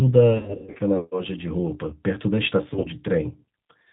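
The speech passes through a G.729 codec at 8 kbit/s, which rebuilds the voice from a vocal tract filter, a pitch predictor and sparse pulses, so nothing above 4 kHz survives and the whole clip sounds plainly rough, band-limited and somewhat synthetic. VoIP packet loss concealed by the speech codec strikes from 0.33 to 0.80 s: lost packets scattered over about 460 ms, with runs up to 100 ms, leave the decoder stretching its last pitch and filter into a fading buzzy tone or coloured noise. A shorter burst of the same concealment from 2.74 to 2.87 s, with runs up to 50 ms, smears the sound again, and it stays weak briefly afterwards.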